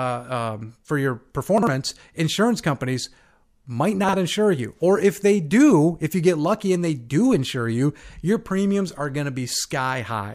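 At 1.58 s and again at 4.04 s there's a quick garbled flicker, each lasting about 0.09 s. Both are chunks out of order. A block of about 46 ms showed up one slot late and swapped places with its neighbour. Nothing goes missing, but the sound jumps forward and then back, and there are three hard joins at each spot.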